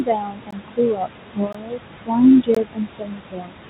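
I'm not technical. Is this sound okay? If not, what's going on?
No. Three separate problems can be heard in this speech.

First, noise suppressor artifacts run through the whole clip. A noise-removal stage in the call system is trying to strip out the room's background noise, turning it down sharply whenever it decides nothing but noise is present. The leftover background swells and sinks with the speech instead of sounding like a steady room.

Second, there is speech cut by the noise suppressor. The same stage sometimes mistakes the quieter parts of the talking for noise and turns them down too. This happens across most of the stretch from the start to 1.86 s, briefly between 2.06 and 2.22 s, and again from 2.42 s to the end. There, soft sounds and word endings come out faint or swallowed, as if the speaker trailed off.

Third, there is a gap between chunks. The audio is being handled in pieces about one second long, and the system leaves a tiny silence at each join instead of stitching them seamlessly. 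Nothing is lost, but you hear a brief dropout, each about 20 ms long, at 0.51, 1.53 and 2.55 s, ticking along once a second.

The somewhat muffled, phone-like tone, with nothing above about 4 kHz, comes from the ordinary phone-quality call connection the audio passed through.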